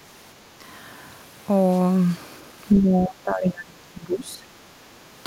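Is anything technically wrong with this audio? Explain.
Yes. The speech is pulled down in three places, most likely speech suppressed in double talk. It is brief and shallow at 0.59 to 0.65 s, long and deep from 2.76 to 4.48 s, and brief again at 4.84 to 4.98 s. The level drops by about 10 dB at first. In the middle stretch it drops by about 25 dB, and the gaps there add up to roughly one and a half seconds. Most likely the echo canceller met two talkers at once and could not tell this voice from returning echo, so it turned the voice down with it.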